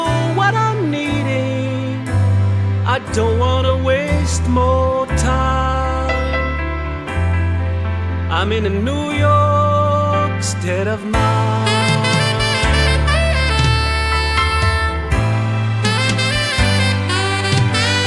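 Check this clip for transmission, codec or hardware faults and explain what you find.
No faults detected.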